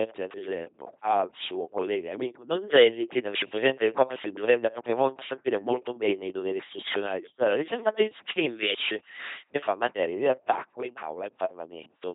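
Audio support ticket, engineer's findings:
LPC-10 vocoder throughout: speech resynthesised from pulse-or-noise excitation through a ten-pole filter. Heavy damage, buzzy robotic tone, nothing above 3.8 kHz. Fits a 2.4 kbit/s stream.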